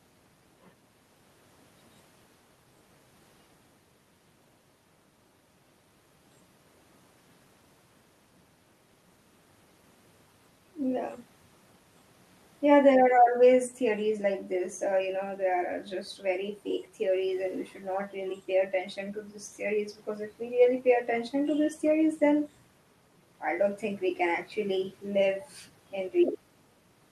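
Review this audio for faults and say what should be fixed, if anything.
Nothing in this speech recording needs fixing. No technical faults turn up anywhere in it, so there is nothing to prevent.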